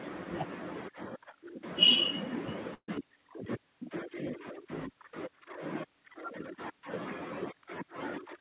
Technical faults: burst of packet loss

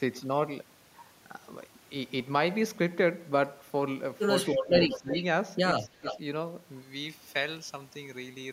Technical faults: speech suppressed in double talk; echo leak; pre-emphasis left on

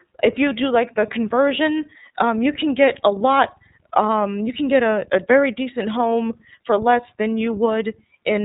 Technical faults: iLBC codec

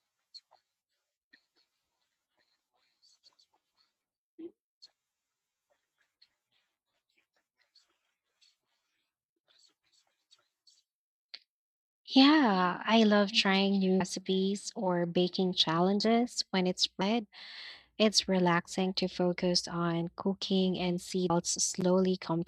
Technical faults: damaged data in a compressed stream

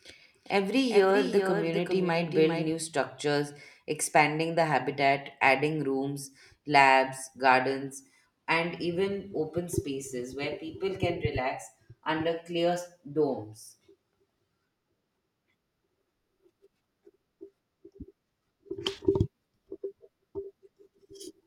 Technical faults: doubled audio track

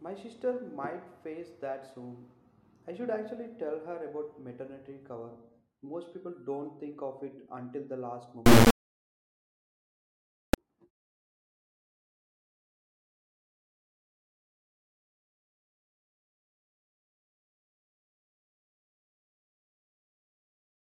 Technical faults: integer read as float

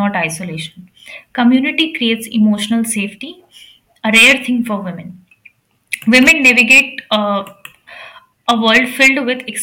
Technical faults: hard clipping

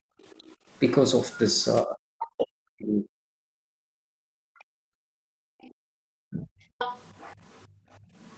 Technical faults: background gated by the echo canceller; other side's voice leaking through; speech suppressed in double talk

